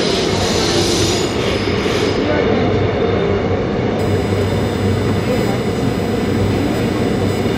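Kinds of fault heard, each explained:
USB whine: 1 ms bus frames leak current through power or ground, producing a fixed 1 kHz-series whine, strongest at 2 kHz, from 3.99 s onward.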